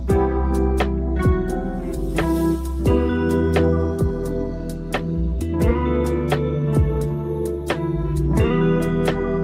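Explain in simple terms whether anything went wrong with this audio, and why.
Nothing went wrong here: the audio runs along steadily with no dropouts, glitches or odd noises at any point.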